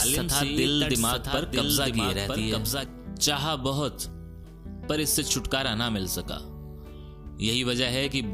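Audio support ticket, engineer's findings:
Doubled audio track, 0.00–2.86 s, present from start: full-band copy around one second behind, roughly 5 dB quieter, no decay, cuts off abruptly. Likely second slower capture path or misaligned edit.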